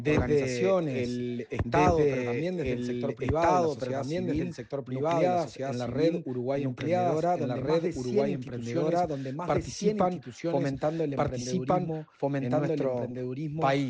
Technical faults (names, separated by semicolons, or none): doubled audio track